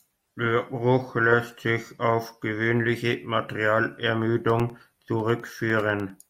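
From 4.40 s to 6.20 s the speech carries periodic USB or driver dropouts. Every 0.1 s something stalls the audio path and roughly a millisecond of signal is replaced by silence, about twenty times in all. Each gap is heard as a sharp tick, giving a steady 10 Hz clicking under the speech. On a waveform these show as tiny flat notches at even spacing. A spectrogram shows thin vertical broadband lines, like fence posts.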